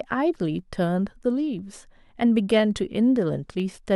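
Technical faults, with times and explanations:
0.59–3.60 s, clock drift buffer slips: about four short clicks land once per second in the speech. They are likely caused by two independent clocks differing by around 200 ppm, so the buffer periodically drops or repeats a handful of samples, producing a brief waveform discontinuity.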